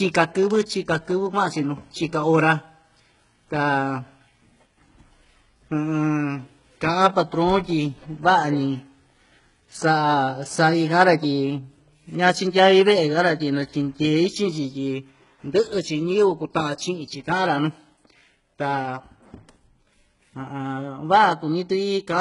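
Throughout, the speech has no content above 11.1 kHz and carries low-bitrate smearing. This is likely low-bitrate audio saved at a high bitrate, so the later MP3 cannot restore the lost detail.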